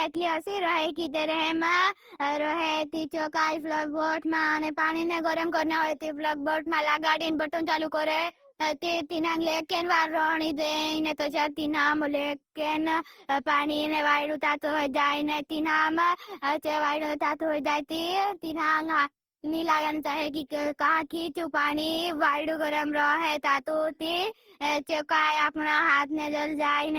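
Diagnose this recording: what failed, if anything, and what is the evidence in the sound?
The codec stage failed. Across the whole speech recording the sound is swirly, smeared and hollow, more degraded than a single encode at this quality would leave, and consonant attacks are blurred. This is likely generation loss: repeated decode and re-encode passes, fitting roughly ten trips through Opus at about 48 kbit/s. Each pass quantises on a shifted frame grid, so noise and gaps accumulate. A spectrogram would show patchy, flickering holes and smudged onsets, with content still reaching about 20.3 kHz.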